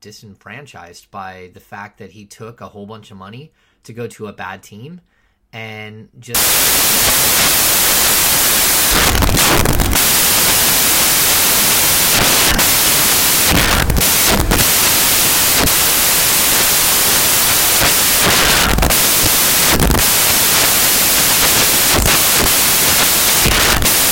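Speech plays cleanly until about 6.35 s, where it turns into broadband noise that continues to the end of the clip. The cause is samples built from the wrong bytes: the reader assembles each sample's bytes incorrectly, whether shifted by one byte, in swapped order, or with a mismatched alignment. The rapidly fluctuating low-order bits then land in the most significant position of each value, which buries the speech under noise.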